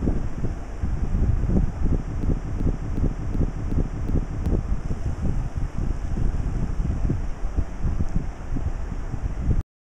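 A system hang loop runs from 2.23 to 4.46 s: the system froze while the audio hardware kept replaying its ring buffer, so one 0.37 s piece, which fits a 16384-sample buffer, repeats six times at 2.69 Hz, replacing about two seconds of sound.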